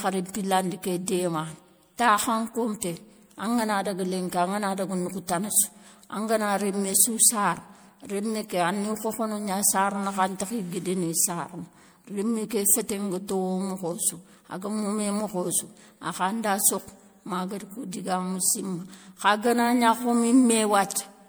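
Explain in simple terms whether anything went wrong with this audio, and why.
Throughout the whole recording, the speech has a swirly, watery quality, sounds hollow, and the starts of sounds are smeared rather than crisp. This is generation loss: the audio was likely squeezed into a compressed format like MP3 and unpacked about four times over. Each round adds its own small errors, and they pile up. A single pass of heavy compression would sound dull or slightly gritty, but not this swirling and hollow.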